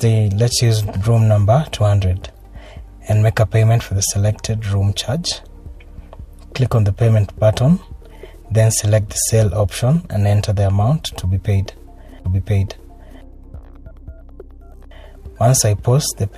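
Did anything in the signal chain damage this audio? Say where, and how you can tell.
Yes. At playback, a stream segment repeated: from 12.24 to 13.26 s about 1.02 s of audio plays again after a small blip, because the player queued one segment twice.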